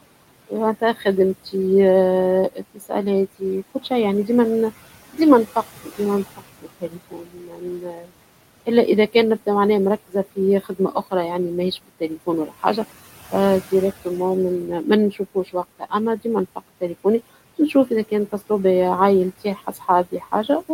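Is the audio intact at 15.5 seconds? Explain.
No. At 15.5 seconds the speech falls inside a stretch from 2.53 to 18.5 s where soft consonants and word endings come out swallowed and faint, dipping by as much as about 19 dB. This is speech cut by the noise suppressor: it misreads quiet parts of the talking as steady background and turns them down along with it, about three seconds of speech in all across that span.

Underneath are noise suppressor artifacts, present throughout the clip. The suppressor pulls the room noise, which sits about 18 dB below the speech, down by about 17 dB in the gaps, then lets it back up under the speech. That switching happens frame by frame.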